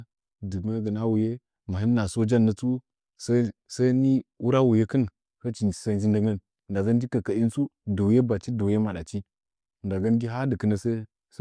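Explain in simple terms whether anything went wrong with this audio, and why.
Nothing went wrong here.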